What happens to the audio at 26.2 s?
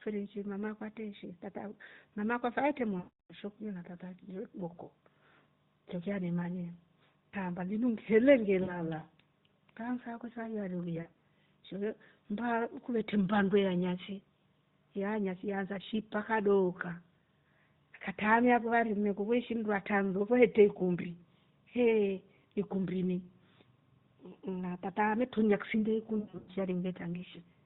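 Lost AMR speech frames from 26.20 to 26.51 s, just after "tata ametulia kisinde ya": the decoder stretches the last good pitch and vocal tract settings with fading gain, so about 220 ms of speech warbles, dips toward silence over the longest 100 ms gap, and returns rough.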